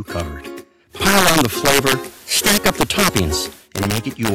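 Integer overflow runs through the whole recording. The loudest peaks are pushed about 8 dB past full scale, and rather than being limited they wrap around to the opposite sign. Roughly one or two percent of samples are affected, and each one jumps across the entire range, producing harsh, sharp cracks on loud moments that are far more abrupt than ordinary clipping. From 0.89 s to 3.69 s the audio shows digital radio blending to analogue. Over a cross-fade of about 135 ms the receiver falls back to the station's FM broadcast, then returns to digital at the end. During the FM stretch, hiss rises to roughly 25 dB below the signal, and the level shifts by about 5 dB.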